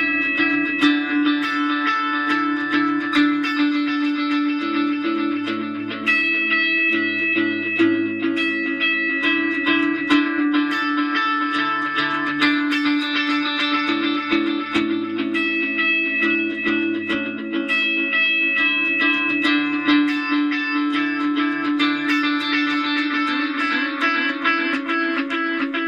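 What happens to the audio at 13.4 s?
Nothing goes wrong at 13.4 s; the audio plays through that moment intact, with no dropout, click or distortion.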